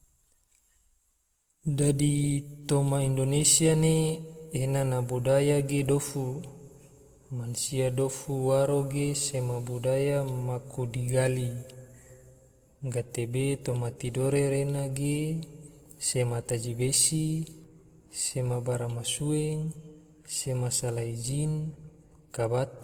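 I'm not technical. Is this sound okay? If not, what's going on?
No. From start to finish the speech sounds rough and grainy, with a plainly audible noisy fizz clinging to it. The likely cause is Opus compression: squeezing the file fills in missing detail with noise and borrowed sound instead of the real thing.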